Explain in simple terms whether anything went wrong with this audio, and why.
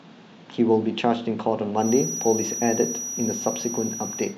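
Something did go wrong here: a feedback whistle comes in at about 1.74 s and keeps going right to the end of the speech. It's a thin, steady tone up around 5.8 kHz, sitting quietly under the talking and wobbling a little in loudness. The likely cause is a loudspeaker feeding back into the microphone, with the loop hovering right at the edge of full feedback, so one high pitch rings on without ever building into a howl.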